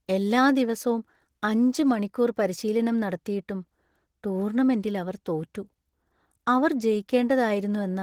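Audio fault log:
throughout, Opus voice compression: speech sounds hoarse and slightly robotic because the band below 8 kHz is rebuilt from coarsely coded excitation, with a thin layer above. This fits roughly 16 kbps. A spectrogram shows smeared harmonics and patchy, blocky energy above 8 kHz.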